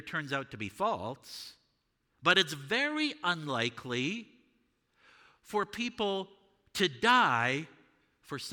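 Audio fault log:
No fault can be heard anywhere in the speech: the signal stays continuous and stable throughout, with nothing in the technical chain intruding on it.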